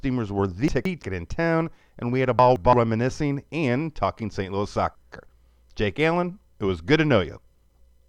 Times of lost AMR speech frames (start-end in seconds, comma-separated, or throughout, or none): none